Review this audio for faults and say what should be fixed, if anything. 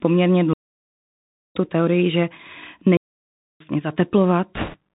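The whole speech clip carries Bluetooth CVSD headset codec damage, and it is plainly audible. The codec sends one up-or-down bit per sample, which fits a 64 kbit/s CVSD stream. Nothing above 4 kHz survives. S sounds turn scratchy, and a granular hiss sits underneath. To prevent this, use a wideband codec such as mSBC or LC3 instead of the narrowband headset profile.

Two digital wireless dropouts cut the sound. The first runs from 0.53 to 1.56 s, about 1.02 s of near silence. The second runs from 2.97 to 3.60 s, about 0.64 s. In each, the receiver lost too much data and muted with a very short fade. Both are clean holes with no noise burst on either side. To prevent them, shorten the distance to the headset and remove sources of 2.4 GHz interference.

Bit errors on a Bluetooth voice link hit from 4.55 to 4.76 s. The error rate is several percent. Because every CVSD bit carries the same small weight, the flipped bits make no loud clicks. 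They add a rushing, crackly noise over the speech instead. To prevent this, improve the radio link margin so fewer bits are corrupted.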